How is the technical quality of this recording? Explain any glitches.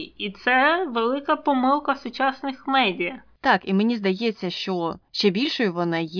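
Nothing to flag: the speech recording shows no audible technical faults at any point.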